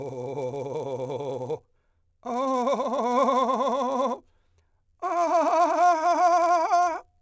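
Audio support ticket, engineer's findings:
Buzz at 100 Hz under the music, whole clip, present only with signal. Resampler restarted on every block: 10 ms blocks converted independently, edge errors ticking at the block rate. Sound points to a 48 kHz to 16 kHz converter.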